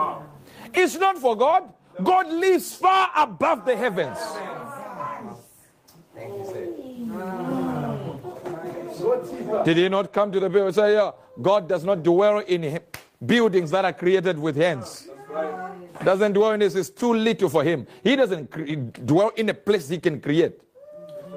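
No technical faults can be heard in this audio.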